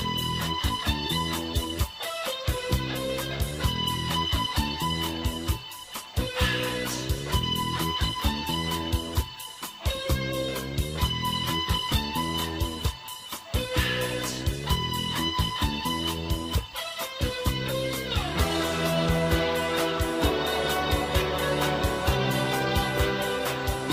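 No technical faults can be heard anywhere in the clip.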